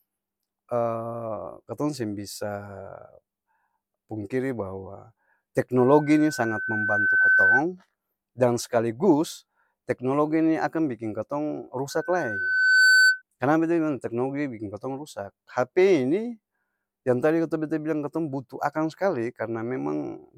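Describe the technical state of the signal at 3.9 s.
At 3.9 s the signal is intact, with no audible fault at that point in the speech.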